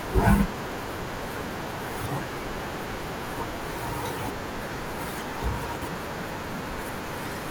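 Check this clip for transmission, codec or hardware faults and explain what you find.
There's one kind of fault here, chunks out of order, and it shows up three times. At 0.6 to 0.72 s and 4.44 to 4.56 s, a 60 ms chunk plays one slot late. At 5.64 to 5.88 s, one plays three slots late. The speech jumbles briefly at the hard joins.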